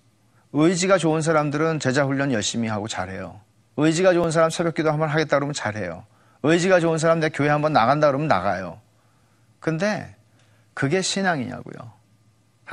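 At about 4.24 s there's a tiny skip in the speech, a very short jump where the two sides butt straight up against each other with no gap of silence between them. It sounds like audio missing between chunks, likely from the recorder working in 5.0 s blocks and dropping a sliver, only a few milliseconds, while it handed over from one block to the next.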